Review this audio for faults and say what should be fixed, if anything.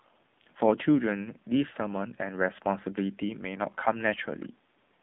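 The whole clip has been through an AMR narrowband mobile codec: nothing gets past about 3.7 kHz, the band sits roughly at 150 Hz to 3.6 kHz, and the buzzy, synthetic edge fits a low 7.4 kbps mode squeezing speech into a vocal-tract model. To prevent it, capture or transfer the speech over a wideband path instead of a narrowband mobile call.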